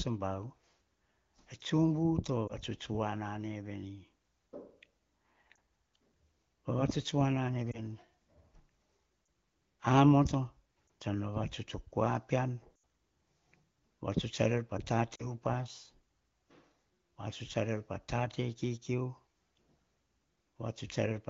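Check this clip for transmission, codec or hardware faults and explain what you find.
The speech contains lost AMR speech frames at 2.47–2.53, 5.55, 7.72–7.82, 9.25–9.27, 10.87–10.89 (just before "tsan vavatuts o"), 12.83 and 15.15–15.29 s. Corrupted frames failed their checksum, so the AMR-WB decoder repeated the last good pitch and vocal-tract settings at falling gain. Most events are brief dips or warbles. The near-silent stretches at 12.83 and 15.15 s fit about four and two consecutive lost frames. The light coding texture fits AMR-WB running near 15.85 kbit/s.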